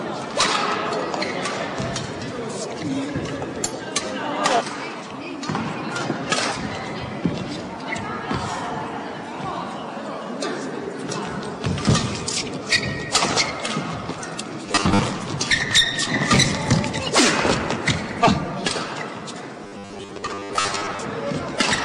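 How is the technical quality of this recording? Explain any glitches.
The recording has two robotic glitches. From 14.66 to 14.99 s and 19.64 to 21.05 s, robotic sound from repeated short buffers imposes a rigid 100 Hz metallic buzz. Likely cause: repeated 10 ms buffers replacing roughly half the audio.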